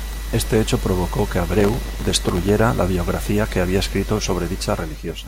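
Speech with processor overload crackle from 1.46 to 2.60 s: dozens of tiny silent gaps, each around 1.5 ms, tear the sound into grit, unlike one clean dropout.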